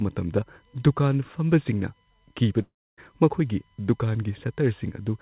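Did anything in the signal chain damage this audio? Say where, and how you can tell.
Yes. USB whine, throughout, from analogue power or ground wiring: a fixed 1 kHz tone, strongest at 9 kHz, about 35 dB below the signal, from the bus's 1 ms frames.

Long network dropout, 2.62 to 2.99 s: the sound decays into a fading buzz or hiss, then about 280 ms of silence, and resumes with 360 ms missing, likely from lost packets.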